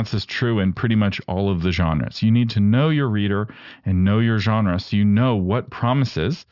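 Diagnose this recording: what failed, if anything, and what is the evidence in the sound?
Aliasing from a sample-rate conversion stage runs throughout: sibilants sound gritty and metallic, with folded energy roughly 25 dB below the speech. A spectrogram shows content packed hard against a 6 kHz edge with mirrored, unrelated traces below it, which fits downsampling to 12 kHz without an anti-aliasing filter.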